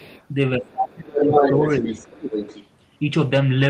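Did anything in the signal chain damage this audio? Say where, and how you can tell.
Yes. Other side's voice leaking through at 0.0–0.24 s, about 25 dB down, then 1.16–2.67 s at roughly speech level. The spectrogram shows overlapping harmonic stacks, likely residual echo left by call processing.

Speech suppressed in double talk from 0.58 to 1.58 s, dropping up to about 25 dB, plus a brief dip of about 5 dB near 1.8–2.04 s; the waveform envelope visibly sags.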